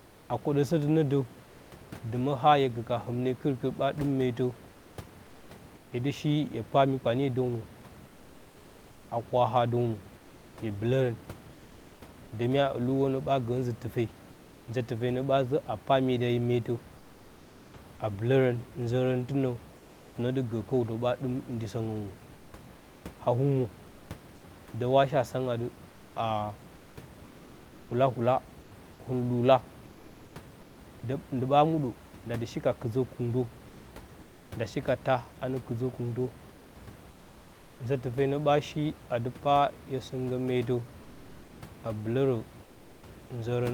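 Comfort noise in place of the background appears in pauses within 0.0–10.57 s, 14.31–30.77 s, 34.21–37.79 s and 42.63–43.03 s, replacing about 2.7 s, 4.1 s, 1.2 s and 0.4 s of the room noise, which otherwise sits about 22 dB below the speech. The likely cause is discontinuous transmission of the kind Opus uses: the sender goes quiet between utterances and the receiver substitutes a smooth, featureless synthetic hiss. In the final gap the background drops by about 3 dB.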